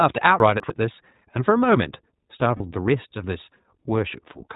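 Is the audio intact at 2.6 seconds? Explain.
No. From 2.56 to 2.62 s the speech turns into a brief held, slightly buzzy vowel before snapping back to normal. These are lost iLBC frames: the decoder repeated the last pitch cycle mixed with noise to cover a 40 ms gap, which fits two missing 20 ms frames.

Around that moment, as across the whole clip, the speech sounds band-limited, a little rough and synthetic. This is the iLBC codec, a narrowband coder that passes nothing above 4 kHz and codes each frame independently. The damage is plainly audible, and the sound fits its 15.2 kbps, 20 ms frame mode.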